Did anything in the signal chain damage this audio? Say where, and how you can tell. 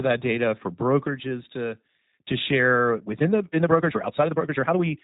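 Yes. At the codec stage, G.729 coding at 8 kbit/s runs throughout, and its damage is plainly audible: the speech is rebuilt from a filter, a pitch predictor and a few pulses, so it sounds rough and synthetic. A spectrogram shows a hard ceiling at 3.8 kHz.

From 2.92 s to the end, the speech suddenly runs about 1.41 times faster while its pitch stays the same, so it sounds rushed. The likely cause is a time-stretched section in playback or editing software that drops short pieces. The waveform shows abrupt splices, and the spectrogram shows compressed syllables with unchanged harmonic spacing.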